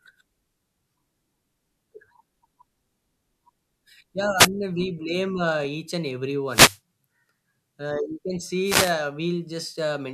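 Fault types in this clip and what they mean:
Wireless microphone noise hit: the radio link from the FM mic dips as reflected signals cancel, so receiver hiss swells up over the speech. You get three quick swishes of static, around 4.37 s, 6.48 s and 8.64 s, the later two lasting about 0.3 s each.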